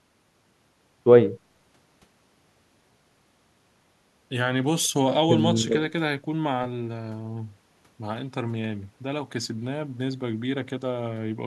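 Nothing technically wrong turns up in this speech recording, so there's no fault here to point to or explain.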